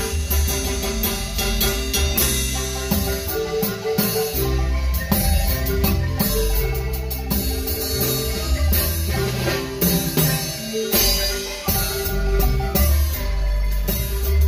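Channel delay causes comb filtering for the whole clip. One channel arrives late by roughly 5 ms. When the two are summed to mono, anything common to both cancels at evenly spaced frequencies. The first notch sits near 100 Hz, with further notches about every 200 Hz above it. These fixed gaps hollow out the spectrum. The sound comes across as hollow and phasey from start to finish.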